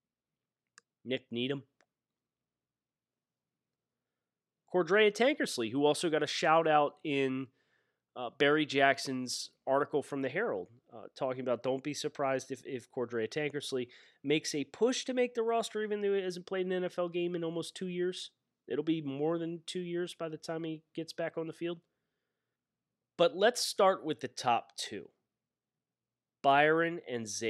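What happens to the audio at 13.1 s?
Nothing goes wrong at 13.1 s; the speech there plays through intact.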